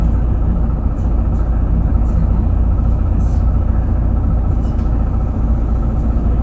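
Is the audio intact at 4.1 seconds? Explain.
Yes, at 4.1 s the sound is intact, with no dropout or glitch; it simply carries the band limit of the WebRTC call path, whose G.722 coding leaves nothing above 8 kHz.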